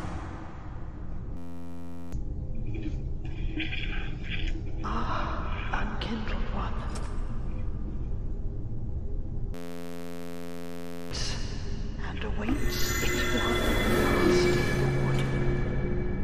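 At 1.37 s to 2.13 s and again at 9.54 s to 11.11 s, the audio locks into a system hang loop. The system stalled while the playback hardware kept replaying one 11.61 ms slice of its ring buffer, which fits a 512-sample buffer. Each repeat lands at 86.1 Hz, so both events come across as a steady buzz at that rate. The underlying sound is lost for roughly 0.7 s in the first event and 1.5 s in the second.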